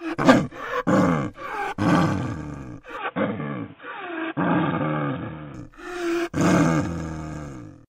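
From 2.97 to 5.54 s the audio turns dull and boxy, with nothing above 3.7 kHz and a new noise floor about 30 dB down, likely from the input switching to a poorer device. A spectrogram shows a flat ceiling across that span; the waveform shows no gap or level step.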